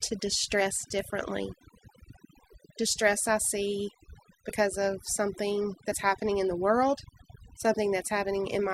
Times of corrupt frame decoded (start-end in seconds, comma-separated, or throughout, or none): none